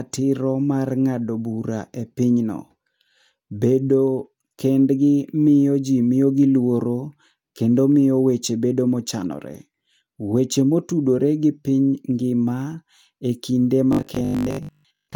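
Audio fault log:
13.93–15.15 s, robotic sound from repeated short buffers: the speech turns into a rigid metallic buzz at 50 Hz that roughly follows the words. Most of this stretch is repeated material. The likely cause is a 20 ms buffer replayed while fresh audio arrived too slowly.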